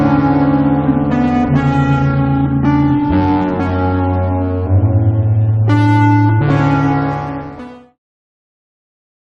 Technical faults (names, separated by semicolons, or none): none